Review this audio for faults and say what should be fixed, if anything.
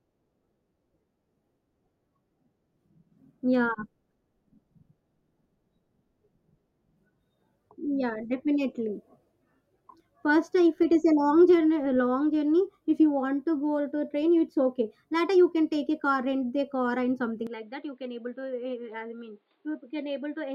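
The recording input likely switched to a poorer device at 17.47 s, right after "rent the car and", and stayed on it until the clip ends at 20.55 s. With no gap at the changeover, the speech suddenly loses everything above 4.9 kHz and turns dull and boxy. It also drops by roughly 10 dB and picks up a new, faint background noise sitting about 45 dB below it. Locking the input device for the whole session would prevent this.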